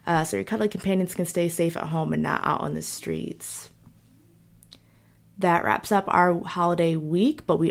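A speech recording with no audible technical fault anywhere in the signal.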